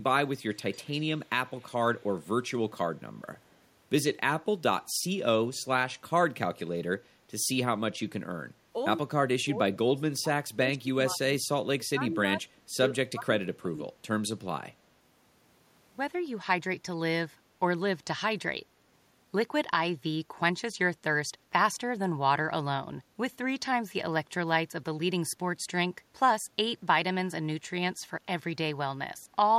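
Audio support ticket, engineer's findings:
Echo leak, 0.54–2.23 s: delayed copy of the far-end talker returning at 151 ms, about 30 dB below the speech. Likely cause: the loudspeaker-side echo canceller leaving residual echo, which is sent back.

Speech suppressed in double talk, 9.05–11.42 s: near-end speech dips in pieces, deepest about 25 dB, roughly 1.5 s affected in total. Likely cause: the echo canceller cannot separate the local talker from the loudspeaker echo and attenuates both.

Speech suppressed in double talk, 11.77–12.39 s: same dipping, deepest about 20 dB, roughly 0.5 s affected. Likely from the same canceller suppression during overlap.

Speech suppressed in double talk, 12.86–13.92 s: same dipping, deepest about 20 dB, roughly 0.7 s affected. Likely from the same mechanism.

Background gated by the echo canceller, 21.38–21.52 s: room sound drops about 7 dB for around 150 ms, then recovers. 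The echo canceller clamps the microphone while the loudspeaker plays and releases it afterwards.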